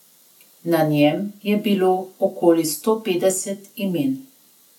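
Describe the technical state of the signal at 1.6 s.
At 1.6 s the speech signal is intact, with no audible fault at that moment.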